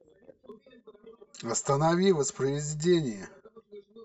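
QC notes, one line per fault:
0.52 s to end: channel delay (comb filtering). From 0.52 s one channel runs roughly 5 ms behind the other. When the two are folded to mono, the shared speech cancels at evenly spaced frequencies, with the first notch near 100 Hz and further notches following at regular intervals above it. The result is a hollow, phasey tone. Unlike a flanger or phaser, these notches never sweep; they stay fixed for the rest of the clip.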